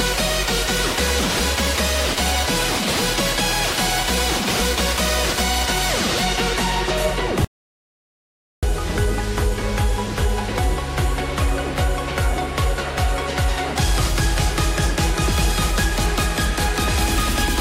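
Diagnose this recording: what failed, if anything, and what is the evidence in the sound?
Audio dropout to silence from 7.45 s to 8.63 s. The sound stops abruptly mid-flow and resumes just as suddenly about 1.18 s later, and the gap between is silent with no room tone or noise floor at all. That points upstream of storage: the input signal was likely lost at the capture stage, through a disconnected device, a failed link or a momentary mute, while the recorder kept writing silent samples. Whatever occurred in that interval is unrecoverable.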